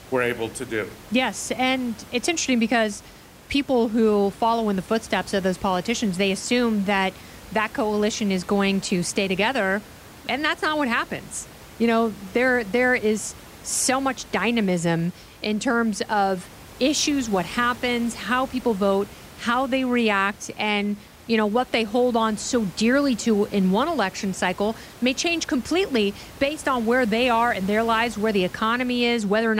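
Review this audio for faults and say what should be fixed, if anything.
Nothing needs fixing; no faults are present here.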